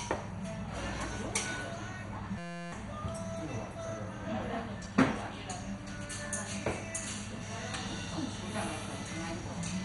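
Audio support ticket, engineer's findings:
Dull, band-limited sound for the whole clip, with gurgling, granular distortion and no content above 11.2 kHz. Probable component: encoder, likely MP2 compression at a low rate, roughly 56 kbps. Too few bits for 32 sub-bands. Upper bands switched off, remaining bands coarsely quantised. Damage heavy.

System hang loop, 2.38 to 2.72 s. Steady buzz at 172 Hz. Probable component: driver or host freeze while hardware kept cycling its ring buffer. One 5.8 ms slice repeated 59 times, which fits a 256-sample buffer. Roughly 300 ms of real audio lost.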